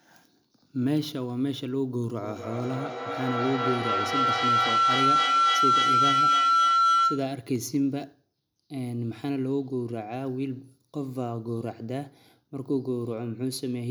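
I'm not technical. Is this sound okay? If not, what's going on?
No. Feedback howl from 2.22 to 7.46 s: two devices on one call in the same room keep re-amplifying each other, building a shrill tone as the sound loops back roughly every 0.3 seconds.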